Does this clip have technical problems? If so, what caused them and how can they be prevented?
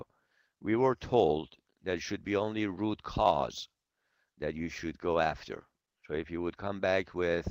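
No, there are no technical problems to point to anywhere in the clip. With nothing going wrong, there is no cause to trace and nothing that needs preventing.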